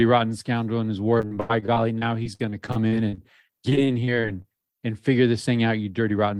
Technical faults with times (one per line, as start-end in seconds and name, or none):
1.17-4.66 repeated packet loss (robotic sound)
5.99-6.33 jitter buffer speed-up